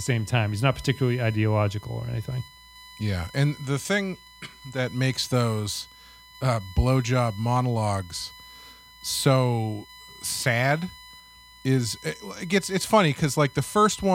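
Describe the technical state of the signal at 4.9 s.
At 4.9 s, as throughout, USB whine: the bus's 1 ms frame current leaks into the audio ground, adding a steady 1 kHz tone series, strongest at 4 kHz, about 25 dB below the speech.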